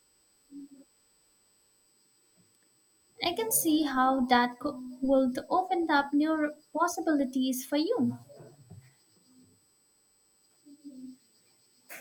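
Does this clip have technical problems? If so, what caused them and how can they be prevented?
Yes. A faint, steady 8 kHz whine runs under the speech throughout. This is USB whine: current pulses from the bus's 125-microsecond microframes leak in through power or ground. To prevent it, power the interface from a clean supply or powered hub, or fit a USB isolator to break the shared ground.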